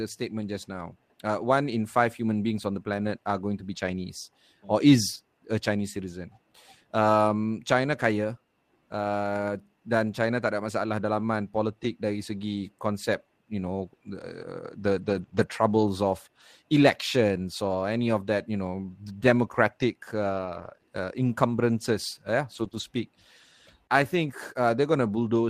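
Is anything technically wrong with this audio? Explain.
Yes, there's packet loss in this speech, and two kinds of recovery are audible.

First, lost packets rebuilt from error correction, at 3.73–3.79 s, 14.97–15.23 s, 15.33–15.43 s, 18.91 s, 20.33–20.75 s and 22.55–22.81 s. Each time, data went missing, but the next packet carried a cut-down, low-bitrate copy of it. The decoder played that copy instead, so nothing drops out. Those stretches just come across rougher and noisier than the speech around them.

Second, short concealed packet loss, in back-to-back pairs at 15.25–15.29 s and 15.29–15.33 s, then 20.77–20.81 s and 20.81–20.85 s. Here no backup copy arrived in time. The receiver filled the hole by extending the last bit of sound, following its pitch where it was voiced and using shaped noise where it wasn't, then faded back into the real signal. You hear a quick smear or wobble, right after rebuilt stretches.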